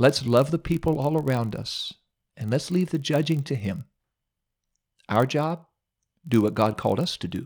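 From start to finish the speech carries a block size mismatch (padded): each block arrives slightly short, the remainder zero-filled, adding a 43.1 Hz buzz, which fits 1024-sample reads. A waveform shows regular tiny dropouts; a spectrogram, thin vertical lines. Speed drops negligibly, to 0.999.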